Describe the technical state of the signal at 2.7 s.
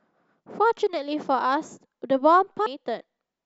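A CD skip occurs at 2.66 s. The laser jumped to a different turn of the disc's spiral. Playback mutes very briefly, giving a tick. The speech then resumes from another point, so the sound jumps abruptly.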